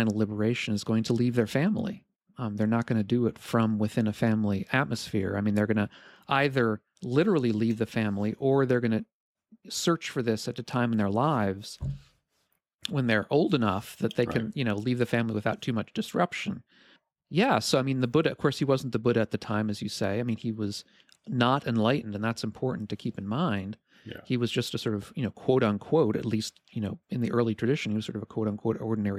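No technical faults can be heard anywhere in the recording, which runs without any audible disturbance to the signal.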